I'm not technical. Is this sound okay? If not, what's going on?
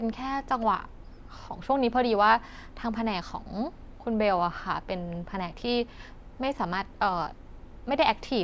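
Yes, nothing in this recording stood out as a problem when I listened to it.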